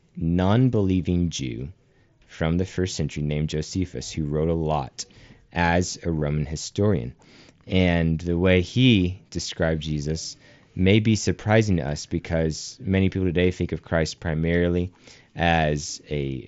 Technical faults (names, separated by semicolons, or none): concealed Bluetooth headset packet loss